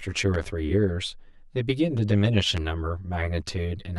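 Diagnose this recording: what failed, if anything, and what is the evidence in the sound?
One channel arrives around 10 ms late at the mono sum. The resulting channel delay (comb filtering) notches evenly from near 50 Hz upward, hollowing the speech throughout.

Loud pops, likely voltage steps in the analogue wiring: a double pop at 0.34–0.45 s, about 10 dB above the speech, and another at 2.57–2.59 s, about 15 dB.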